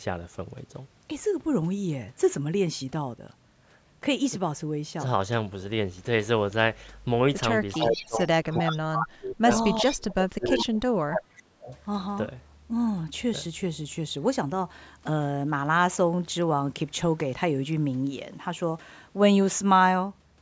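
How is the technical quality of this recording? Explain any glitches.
The recording has two related call-processing faults in the middle of this speech clip, between 7.7 and 11.8 s.

Echo leak at 7.72–8.26 s, 8.55–8.76 s, 9.79–9.93 s and 11.63–11.83 s: a delayed copy of the speech, trailing by 391 ms and about 10 to 25 dB below the direct voice. The likely cause is a loudspeaker echo canceller letting residual pickup return down the line.

Speech suppressed in double talk at 7.76–9.5 s, 9.8–10.83 s and 11.06–11.72 s: the talker's level dips sharply, by roughly 30 dB or more, in broken stretches. The echo canceller likely could not separate the talker from the echo while both were active, so it attenuated everything.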